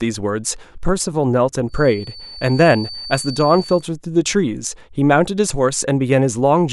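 A speech clip with a feedback whistle from 1.65 to 3.87 s: a thin, steady tone near 4.5 kHz sits roughly 15 dB below the speech, swelling and fading slowly in level. The likely cause is a loudspeaker-to-microphone loop held just at the edge of feedback, sustaining that one frequency. Unlike runaway howl, it never builds into a howl, and unlike an electrical interference tone, its level drifts rather than holding perfectly fixed.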